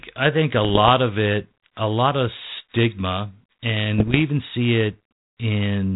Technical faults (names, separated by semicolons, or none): bit errors on an ADPCM link